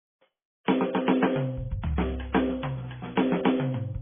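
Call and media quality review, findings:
MP3 compression, music, throughout the clip. Symptom: dull, band-limited sound with heavy watery, swirling texture and smeared attacks. Spectrogram: hard horizontal ceiling with nothing above 3.5 kHz, and patchy time-frequency blocks flickering on and off below it. Waveform: transients rounded off. Component: likely a low-rate MP3 encode, consistent with about 16 kbps. Mechanism: the bit-starved encoder chops treble at a fixed cutoff and zeroes weak frequency lines from frame to frame.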